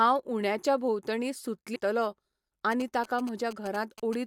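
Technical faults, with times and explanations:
1.75 s, compressed frames skipped: the speech suddenly jumps forward, losing roughly 300 ms of audio. That gap fits around fifteen frames of about 21.3 ms each that were either missing from the file or thrown out by the decoder as damaged. Playback resumes a whole number of frames later.
2.72–4.15 s, GSM signalling bursts: a 2G phone close to the recording gear is handshaking with the network. It transmits short groups of radio bursts instead of a steady carrier, and the audio circuitry rectifies them. The result sits about 15 dB under the speech and has that familiar galloping dit-dit-dit rhythm, made of short buzzes at the 216.7 Hz burst rate. It stops just before the clip ends.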